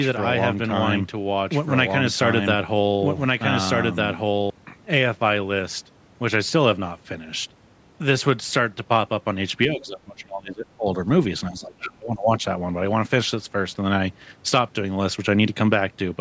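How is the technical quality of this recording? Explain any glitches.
The recording has two distinct problems: a doubled track at the start and two stretches where the speech is pushed down during double talk.

From the start to 4.5 s there is a doubled audio track, already present when the clip begins. A second copy of the speech trails about one and a half seconds behind, at roughly the same level, with no room colour. This likely comes from the signal being captured twice along a slower path.

From 9.68 to 10.98 s and from 11.5 to 12.43 s, the speech is suppressed in double talk. It drops by about 25 dB at its deepest, covering about a second and then about 0.7 s. The likely cause is an echo canceller that mistook the talker for loudspeaker echo while both sides spoke. The audio here is band-limited to 8 kHz by the call's microphone processing.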